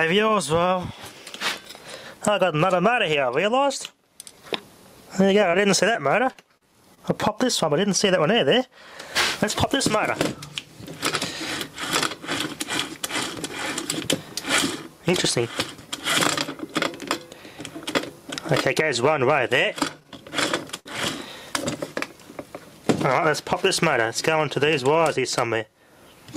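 Repeated packet loss (robotic sound) runs from 5.51 to 6.98 s: seven short holes, the longest 37 ms, are patched by stretching the preceding sound, leaving choppy audio with about 100 ms missing. Repeated stalls (stutter) follow at 20.00 to 20.87 s, where late packets empty the jitter buffer four times, up to 59 ms each, so the audio drags and hiccups without losing anything.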